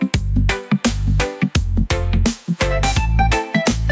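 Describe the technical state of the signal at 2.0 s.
At 2.0 s the input gain is most likely set far too high for the microphone, so a fast limiter or compressor keeps clamping it down; this gain pumping runs through the whole clip rather than just this moment. Each loud sound pulls the level down by roughly 10 dB, so loud and soft parts sit close together and the sound is squashed. The call's microphone processing passes nothing above 8 kHz.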